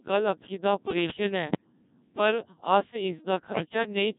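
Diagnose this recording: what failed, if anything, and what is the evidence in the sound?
The failure sits at the codec stage: the speech has been carried by the Codec 2 vocoder, and heavily so, with a sound that fits its 1.6 kbit/s mode. Only pitch, voicing, energy and a rough spectral envelope survive the trip. The decoder rebuilds the voice from a bank of sine waves, so the original waveform is gone. The whole clip is buzzy and robotic.

On top of that, the radio link delivered corrupted frames to the decoder: bit errors on digital voice radio, in two bursts from 1.48 to 1.72 s and from 3.48 to 3.66 s. At such a low bitrate, each flipped bit changes the pitch, level, voicing or envelope of an entire frame. In both bursts the voice lurches in pitch and loudness and turns to warbling gibberish. The first burst suggests an error rate of a few percent, the second one nearer 7 percent.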